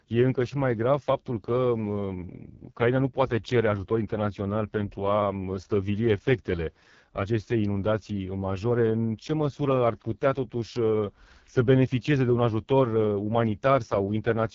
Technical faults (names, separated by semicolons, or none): AMR wideband (HD Voice) codec